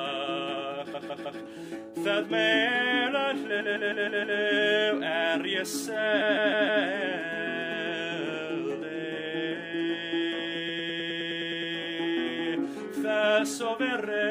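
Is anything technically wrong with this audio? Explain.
Yes. The audio stutters four times with repeated frames: the same short block is replayed several times in a row. The block is 156.7 ms at 0.93–1.4 s, 3.59–4.38 s and 6.21–6.83 s, and 104.5 ms at 10.67–11.72 s, which is the fastest and longest stutter. A run of compressed frames was written more than once, so the decoder plays it again, lengthening the audio by each repeat.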